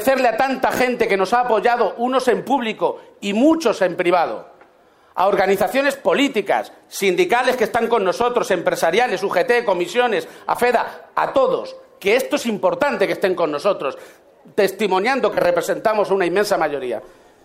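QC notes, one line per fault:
0.77–0.79 s and 15.33–15.38 s, lost LE Audio frames: two brief gaps of 22.5 ms and 37.5 ms, which fits runs of three and five 7.5 ms frames. The LC3 decoder fills each gap by repeating the last spectrum with scrambled phase, so tonal content turns into a short noisy smear rather than going silent or clicking. That smeared continuation, instead of a hard mute or a sharp edge, sets it apart from a plain dropout.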